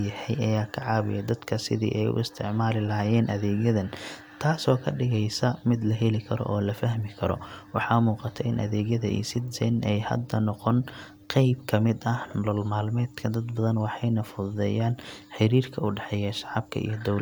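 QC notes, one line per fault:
Nothing stood out on listening.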